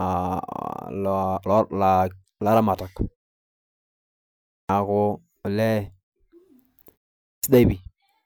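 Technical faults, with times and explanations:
4.58 s and 7.32 s: clipped start after a pause. After 1.5 s of silence, and again after a shorter 0.43 s gap, the speech resumes abruptly with its onset missing, about 113 ms lost the first time and about 115 ms the second. The output path goes idle during the quiet stretch and has to wake and relock before it passes sound again, so the opening sounds of the next stretch of speech are swallowed and it starts mid-syllable out of silence.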